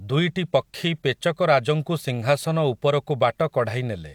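No technical faults are audible anywhere in this speech recording.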